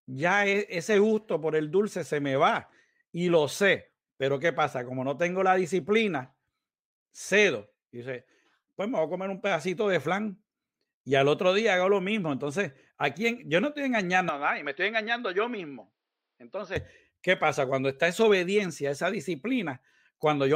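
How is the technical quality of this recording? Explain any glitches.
The recording has one glitch: a stretch in the last third where the speech briefly sounds like it comes from different equipment.

From 14.29 to 16.76 s the speech turns duller and boxier, with nothing above 5.8 kHz, drops a few decibels in level and picks up a new, low background noise. It then clears up again. The switch is seamless, with no gap of silence. The likely cause is the input switching to a poorer device, whose narrower band, own tone and own noise replace the original microphone's. A simple filter or codec bandwidth drop would dull the sound without also shifting the level and noise floor together.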